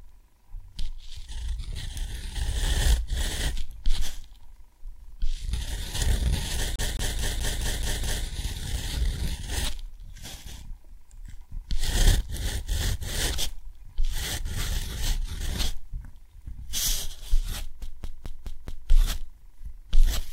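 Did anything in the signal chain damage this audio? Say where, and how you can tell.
Yes. CD stuck on one turn at 6.76–8.25 s and 17.82–18.89 s: at playback the laser jumps back each rotation, replaying one 213 ms slice with brief mutes.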